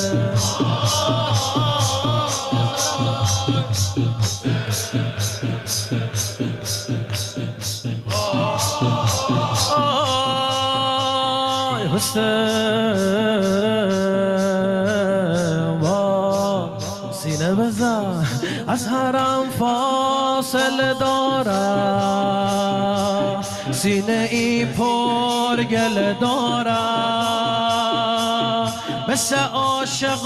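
Gain pumping runs throughout the clip: the gain swings by roughly 15 dB, squashing loud and soft passages together. The likely cause is input gain set far too high, with a fast limiter clamping each peak.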